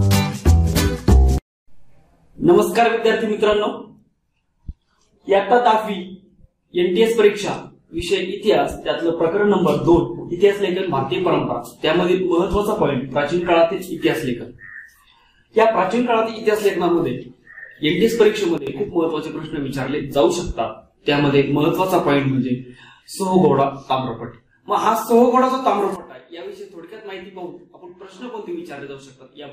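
At 18.58 s the level drops abruptly by about 12 dB, holding only until 18.67 s. At 25.96 s it falls by about 16 dB and stays down to the end. These are sudden gain jumps, likely from gain changed without a ramp. The sound and background noise drop together.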